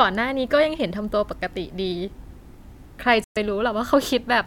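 At 3.24 s the speech cuts abruptly to silence for about 115 ms, resuming at 3.37 s. This is a Bluetooth stall, likely caused by radio interference delaying packets so the headphones' buffer emptied and playback halted until retransmitted audio arrived.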